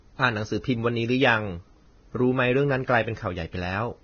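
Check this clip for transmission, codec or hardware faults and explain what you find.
There's one fault, running the whole way through this speech. Nothing above 6.5 kHz, with hissy, grainy treble and smeared consonant attacks, likely Vorbis compression, pointing to a bitrate near 18 kbps.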